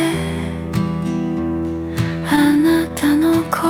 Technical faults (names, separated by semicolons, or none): repeated stalls (stutter)